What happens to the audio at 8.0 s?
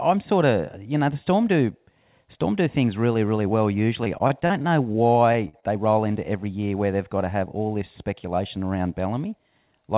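Right after "all this", from 8.03 to 8.39 s, there is a jitter buffer speed-up. The receiver's buffer held excess audio and cut out short pitch-period segments repeatedly, about 40 ms in total. The speech runs at 108% speed with unchanged pitch and sounds briefly hurried.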